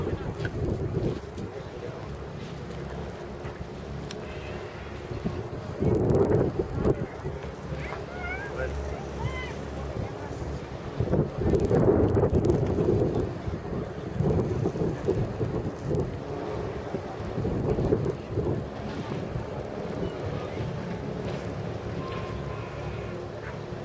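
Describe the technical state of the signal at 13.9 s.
At 13.9 s the resampler is restarted on every block, as it is throughout the clip. Each 50 ms block is converted in isolation, likely downsampling from 48 kHz to 16 kHz, so every block edge carries a small error, heard as regular ticks at 20 per second whenever signal is present.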